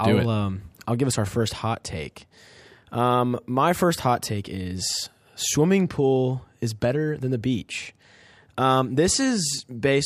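No technical faults are audible.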